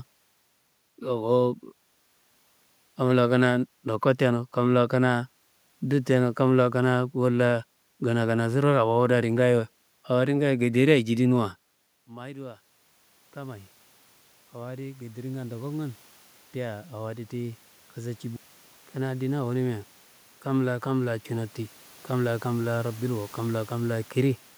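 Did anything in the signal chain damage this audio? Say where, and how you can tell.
Yes. Call processing: automatic gain rising from 14.53 to 19.93 s, after input fell about 19 dB, lifts gain about 10 dB, swelling voice and room noise together.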